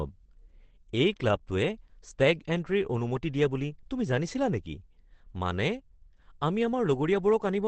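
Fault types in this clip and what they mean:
Opus compression: The speech sounds heavily muffled and hoarse, with nothing above 8.5 kHz. This likely comes from Opus's speech mode at about 12 kbps.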